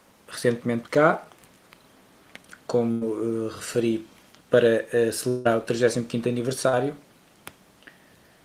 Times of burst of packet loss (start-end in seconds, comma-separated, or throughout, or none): 2.91-3.03